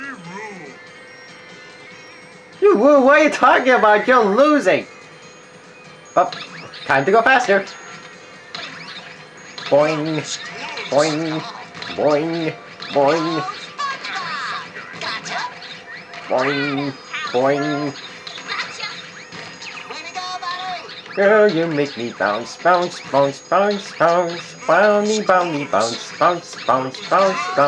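Nothing stood out as a technical fault on listening.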